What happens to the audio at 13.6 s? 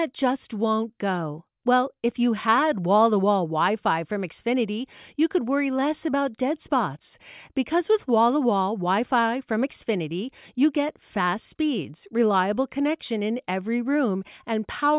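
Nothing goes wrong at 13.6 s: the speech carries on intact through that moment, with no dropout, click or distortion.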